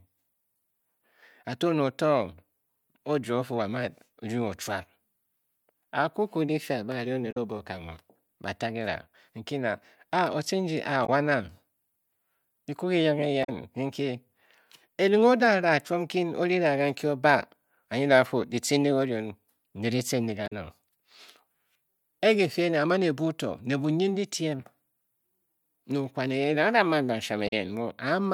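Damaged data in a compressed stream breaks up this speech recording five times: corrupted bytes leave the decoder misreading frames and losing sync until it locks onto a later frame header. Each hit is a brief garbled blip cutting through the speech, at 7.31–7.37 s, 11.05–11.09 s, 13.43–13.49 s, 20.46–20.52 s and 27.47–27.53 s. Each lasts roughly 40 to 65 ms.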